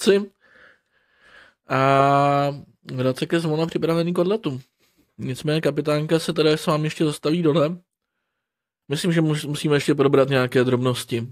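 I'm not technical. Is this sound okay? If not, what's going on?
Yes, this speech recording sounds fine, with nothing going wrong that you'd need to worry about.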